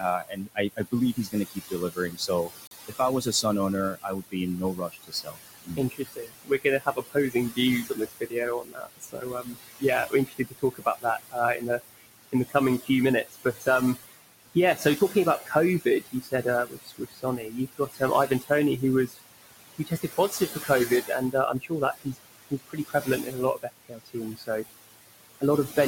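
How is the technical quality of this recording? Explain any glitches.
Technical quality suffers from aggressive noise suppression and one brief dropout.

Noise suppressor artifacts run throughout. The room noise, about 10 dB below the speech, is pulled down by about 19 dB between phrases and rises under them.

Speech cut by the noise suppressor occurs from 0.0 to 19.19 s and again from 19.74 to 24.65 s. The suppressor mistakes quiet speech for noise and drops it by up to about 22 dB. Soft parts sound swallowed, around seven seconds in the first stretch and two in the second.

At 2.67 s the sound cuts to silence for 39 ms, then resumes. This is likely a Bluetooth stall, where delayed packets let the headphone buffer run dry.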